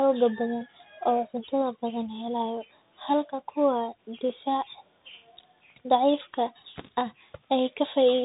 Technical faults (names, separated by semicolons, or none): Bluetooth CVSD headset codec